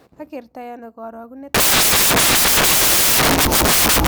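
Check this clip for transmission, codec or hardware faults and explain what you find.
One fault: samples built from the wrong bytes, from 1.54 s to the end. The reader assembles each sample from misaligned or swapped bytes, so the rapidly changing low bits dominate every value. The speech turns into loud, harsh broadband noise, close to white on the louder sounds.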